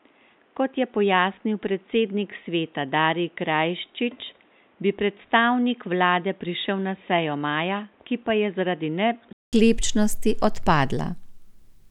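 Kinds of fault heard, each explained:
Input switched to a poorer device: from the start until about 9.53 s the speech has nothing above 3.8 kHz, so it sounds dull and boxy, is somewhat quieter, and carries its own faint noise floor well below the voice. A gap of about 200 ms follows, and then the full-band sound returns. This pattern is likely the recording input changing from a narrowband device, such as a headset's call profile, back to the normal microphone.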